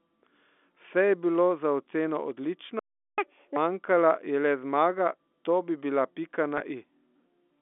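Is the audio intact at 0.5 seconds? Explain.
Yes, the speech at 0.5 seconds is intact, carried over the narrow telephone band of G.711 coding with no fault at that point.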